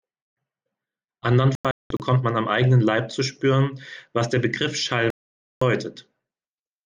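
From 1.55 to 2.00 s the speech breaks up in a digital broadcast dropout: the receiver stopped getting decodable frames and muted, leaving several short holes totalling 320 ms across roughly 450 ms, the longest 192 ms. At 5.10 to 5.62 s a second dropout mutes for a solid 512 ms. Unlike analogue fading, there is no hiss or noise between gaps, just clean silence, and unlike concealed packet loss nothing is smeared or repeated. The missing speech is simply gone.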